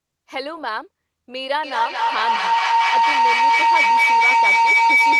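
From 1.63 s to the end, feedback howl takes over: the microphone-to-loudspeaker loop gains level each pass, so repeats swell rather than decay, narrowing to a tone near 2 kHz that peaks about 10 dB above the speech. The repeats come roughly every 200 ms, and the howl shows as a bright horizontal spectrogram line and a swelling waveform envelope.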